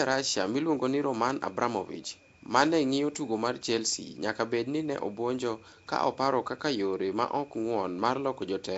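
From start to finish the speech carries a rough, hissy halo and a smeared, underwater quality, and nothing is heard above about 7.7 kHz. This is likely Nellymoser compression, the Nellymoser Asao codec used for Flash microphone audio, at a rate that fits 32 kbps. It spends a fixed two bits per sample on short blocks, so quiet bands get no bits and are filled with noise, which produces the hiss and smearing.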